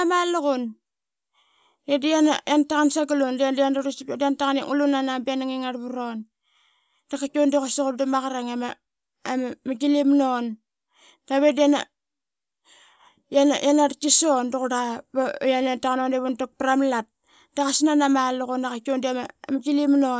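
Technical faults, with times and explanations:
No technical faults can be heard in the recording. There is nothing to list with a time or an explanation.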